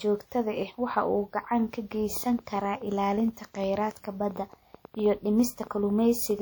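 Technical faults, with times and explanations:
2.17 to 6.40 s, train of clicks: after "waxa uu gacan ka", about twenty same-shaped clicks tick at an uneven 5.4 per second, roughly as loud as the speech and heard in pauses too, likely from interference or a faulty connection or supply. Unlike random crackle, each click matches the last.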